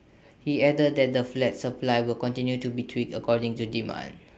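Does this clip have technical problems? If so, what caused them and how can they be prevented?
No, nothing stood out on listening to this speech, which comes through a WebRTC call path with an Opus codec limiting the audio to about 8 kHz.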